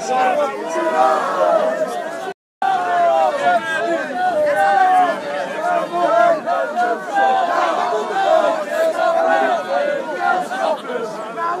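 At 2.32 s the player most likely ran out of buffered data, or its playback thread was held up, so it had nothing to send to the output. The result is a playback stall: the sound cuts off abruptly in mid-flow and the output goes completely silent for about 296 ms, until 2.62 s, when the audio picks up again. The gap is long enough to hear clearly as a hole in the sound.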